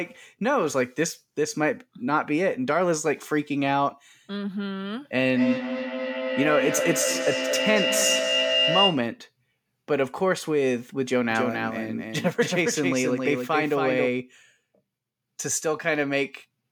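A speech recording with two faults. From 5.32 to 9.16 s a feedback howl builds near 3 kHz, pulsing about every 200 ms and peaking level with the speech, as the microphone-to-loudspeaker loop gains on each trip. From 11.31 to 14.07 s there is a doubled audio track, with a dry full-band copy roughly 300 ms behind and about 5 dB quieter, likely from a second, slower capture path mixed in.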